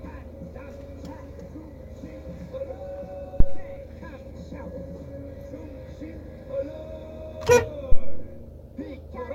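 Phantom power thumps hit this recording of sounds at 3.40 to 3.69 s and again at 7.92 to 8.33 s. Each is a deep low-frequency thump peaking at about -4 dBFS, dying away within 66 ms and 91 ms respectively. The cause is a supply voltage being switched on or off while the input was live. That sudden DC step passes through the coupling capacitors and is reproduced as a single heavy pulse.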